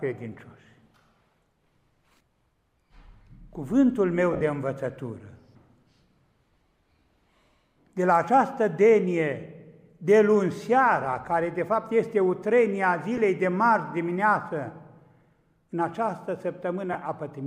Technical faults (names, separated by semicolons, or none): lost LE Audio frames